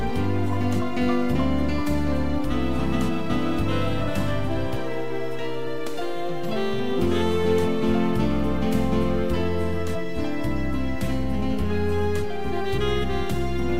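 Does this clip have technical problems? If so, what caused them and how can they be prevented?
No, nothing in this clip stood out as a technical problem on listening.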